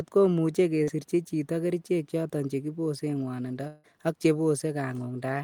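At 0.83 s, right after "ko muche" and before "chito kerichek choton", there is a short concealed packet loss. About 40 ms of audio did not arrive in time, and the decoder bridged the gap by extending the preceding sound for roughly the same length before merging back into the real signal. The result is a brief smear lasting until 0.89 s, heard as a wobble where the speech is held rather than articulated.

From 3.67 s to 3.86 s the speech is replaced by about 160 ms of synthetic continuation. The preceding sound is stretched into a fading buzz or hiss instead of real content, and there is no stretch of true silence before the audio resumes with that portion missing. The length and the fully synthesized fill point to a likely long network dropout, where the receiver kept concealing until packets arrived again.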